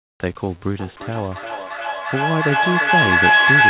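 From 0 to 0.2 s, the sender has likely switched to discontinuous transmission, with the receiver filling the gap with comfort noise in place of the background. The real room tone is replaced by a flat, featureless hiss, about 34 dB quieter, before the speech begins.

From 0.79 s to the end, the microphone-to-loudspeaker loop between two devices on the call gains level on each pass, producing a feedback howl. It narrows to a tone near 1.5 kHz, repeats at roughly 400 ms intervals, and peaks about 9 dB above the speech. The G.711 call path's 4 kHz ceiling can also be heard.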